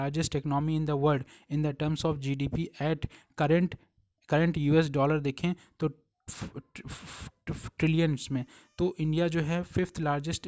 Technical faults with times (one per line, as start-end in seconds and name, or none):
none